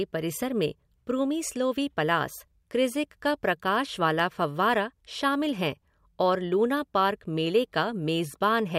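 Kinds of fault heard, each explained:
Block of digital silence: at 4.19 s a run of speech samples is replaced by silence for about 0.67 ms, which fits a 32-sample block, and then the sound returns with no fade. The instant drop and return merge into one brief tick rather than a hole. On a waveform it is a tiny near-flat gap between two sharp steps. On a spectrogram it is a thin vertical broadband streak across all frequencies.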